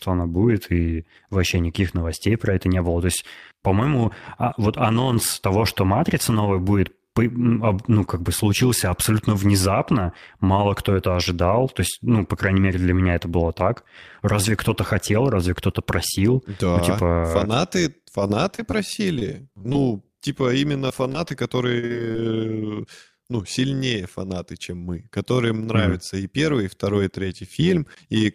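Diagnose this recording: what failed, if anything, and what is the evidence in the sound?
Overlap-add ripple runs through the whole recording, a metallic buzz of about 6 dB at roughly 100 Hz. The fault sits in frame-based call processing. The speech was cut into windowed frames and rebuilt with an overlap whose windows do not sum to a constant gain. The level therefore swells and sags once per frame, and at this rate that comes across as a metallic buzz with extra tones around the voice.

Repeated packet loss (robotic sound) comes from the network stage and hits from 18.27 to 19.76 s, just after "да ну типа фанаты", and again from 20.88 to 22.16 s. Each stretch holds a rapid string of short holes, which points to around nine and six lost packets. The longest holes are 25 ms and 34 ms. The decoder bridges each hole by extending the last sound, so about a tenth of each span is synthetic and the speech turns choppy, with fragments missing.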